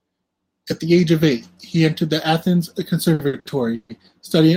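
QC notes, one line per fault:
3.13–3.91 s, repeated stalls (stutter): the speech stalls four times, the longest gap 140 ms. Packets arrive late, so the jitter buffer keeps emptying and the receiver stretches the last sound. About 320 ms is filled this way, 41% of the span, but nothing is lost.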